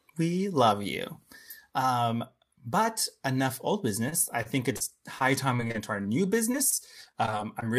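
From 4.09 to 6.06 s and 6.52 to 7.65 s, repeated packet loss patches gaps with repeated sound, making robotic, choppy speech; spectrograms show smeared, stuttering blocks.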